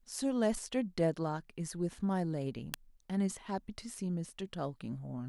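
At 2.74 s, a nearby switch, motor or static discharge likely arced, and the audio line picked up that brief burst of electrical energy as an electrical switching spike. It lasts only a couple of milliseconds and peaks at roughly -10 dBFS. It is heard as a sharp snap or a tight cluster of clicks laid over the speech, sudden and separate from the sound around it, with nothing in the speech to account for it.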